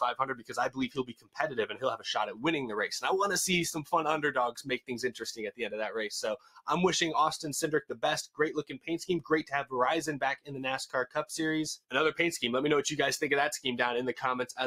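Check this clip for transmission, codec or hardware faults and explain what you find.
A speech-oriented noise suppressor is processing non-speech audio and treating parts of it as noise.

Noise suppressor applied to music or sounds, throughout: the suppressor keeps misreading steady content and decaying tails as noise and pulling them down, so level swings by around 10 dB. Sharp onsets pass, but sustained parts sink and the sound pumps and thins.

Sound cut by the noise suppressor, at 0.21–1.39 s, 1.69–2.06 s, 4.57–4.91 s, 6.38–6.66 s, 7.83–8.03 s and 8.64–8.89 s: here the suppressor clamps harder, with drops of about 20, 13, 19, 17, 20 and 19 dB. Sustained or fading material sinks in level, leaving truncated decays.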